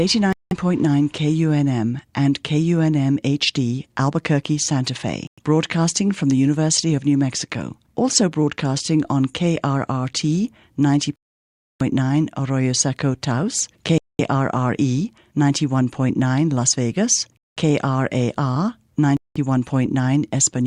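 The speech cuts to dead silence six times: at 0.33, 5.27, 11.16, 13.98, 17.37 and 19.17 s. Most gaps last 0.1 to 0.2 s, but the one at 11.16 s lasts 0.64 s. The sound then resumes. This is likely a Bluetooth stall: the headphone buffer ran dry.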